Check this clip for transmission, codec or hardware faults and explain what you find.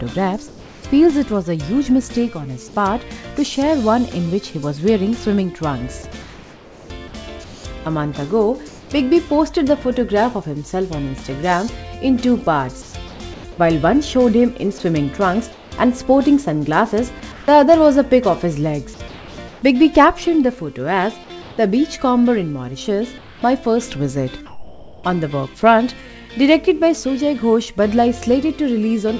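One fault recurs through the clip: comfort noise in place of the background, at 0.48–0.84, 6.22–8.90, 12.82–13.44, 15.52–15.72, 17.32–17.48, 19.08–19.62, 21.42–21.58 and 23.18–25.04 s.

In these pauses, the real background gives way to a steady, featureless hiss, up to about 3 dB quieter. This is likely discontinuous transmission, with the receiver synthesising noise while the sender stays silent. The band stops at 8 kHz throughout, which fits a wideband call codec such as G.722.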